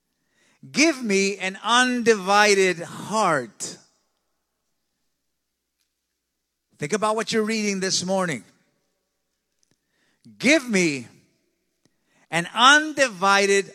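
No faults are audible anywhere in the recording.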